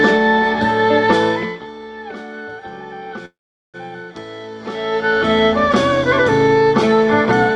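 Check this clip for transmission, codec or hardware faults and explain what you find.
One transmission fault stands out: a call audio freeze from 3.25 to 3.77 s. The sound stops and the stream pauses for about half a second. The cause is likely that packets were held up in transit while the jitter buffer ran dry. The receiver stretches the last sound briefly. It then falls to near silence for roughly 0.4 s. When the packets arrive, the audio resumes where it left off. Nothing is lost. A gap of about 0.48 s is inserted, and everything after it runs that much later. The audio also carries call-codec coloration, with content ending near 12 kHz, which fits Opus at around 40 kbps.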